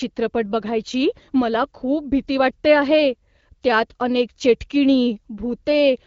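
Speech, with no audible technical faults.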